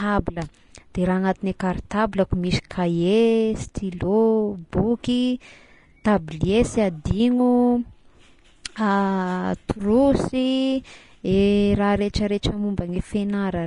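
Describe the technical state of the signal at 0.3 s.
At 0.3 s the speech most likely passed through low-bitrate Vorbis compression, which persists for the whole clip and fits a rate near 33 kbps. The encoder discards everything above 10.6 kHz and quantises the remaining treble coarsely, so consonants turn hissy and grainy and attacks blur.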